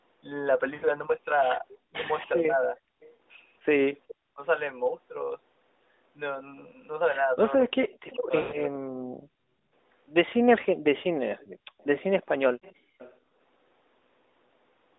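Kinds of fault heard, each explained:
Lost AMR speech frames: Radio errors corrupted speech frames so they failed their checks, and the AMR decoder filled the gaps by repeating its last good pitch and vocal tract settings at falling gain. The speech smears and fades briefly at 0.74 to 0.86 s, a gap of 80 ms that fits about four frames, then again at 3.16 to 3.18 s (40 ms). The longest gap, 100 ms, comes at 8.42 to 8.58 s, after which the voice returns weak and rough for a moment.
Speech suppressed in double talk: Between 1.91 and 4.42 s, both ends appear to talk at once. The echo canceller, likely unable to tell the near talker from loudspeaker echo, turns everything down together. The voice dips and breaks into pieces for roughly half a second in total across that stretch. At its deepest the level falls by about 40 dB, so parts of the talker's speech nearly vanish while the other side is speaking.
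Echo leak: From 3.01 to 4.15 s, a faint delayed copy of the speech trails the original by 414 ms, sitting about 25 dB below it. The far end is likely playing the call over a loudspeaker, and its echo canceller did not fully remove what its microphone picked up. The leftover was sent back down the line, so a repeat rides under the voice during that window.
Background gated by the echo canceller: At 9.21 to 9.56 s, while the loudspeaker side was active, the echo canceller clamped the microphone down hard to keep echo out. The room sound behind the speech drops away by as much as about 39 dB for roughly 300 ms. It comes back once the canceller releases, which gives the background a brief hole.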